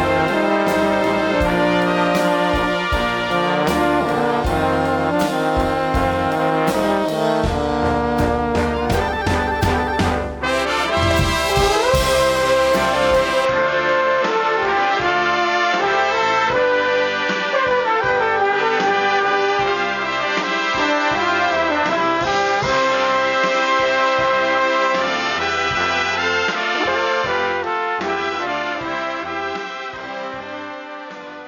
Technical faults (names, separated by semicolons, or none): input switched to a poorer device